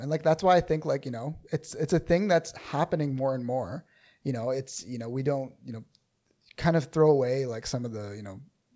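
No technical faults are audible in this recording.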